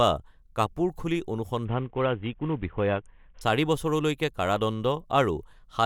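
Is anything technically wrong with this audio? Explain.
Yes, there's a Bluetooth SBC bit pool drop from 1.65 to 3.41 s, right after "বা কাপোৰ খুলি". The link got congested and the bit pool seems to fall from about 28 to 5, which fits roughly 54 kbps. The treble dulls and gritty quantisation noise rises until it recovers.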